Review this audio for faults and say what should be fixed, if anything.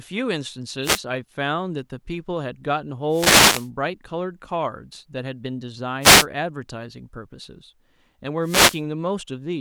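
Wireless microphone noise hits at 0.82–1.01, 3.09–3.70, 6.01–6.26 and 8.41–8.82 s: the FM radio link fades as reflections cancel, so receiver static swishes up over the speech. Fix it with diversity receivers, better antenna placement and line of sight.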